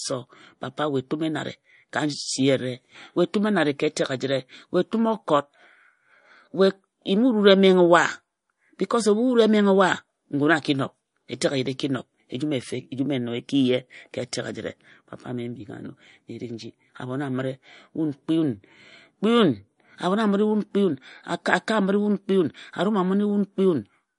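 Throughout the speech, the sound has a plainly audible watery, swirling quality with no content above about 10.6 kHz. This is likely MP3 compression at a low bitrate, which fits about 40 kbps. Starved of bits, the encoder removed the treble and dropped weak spectral detail that flickers between frames.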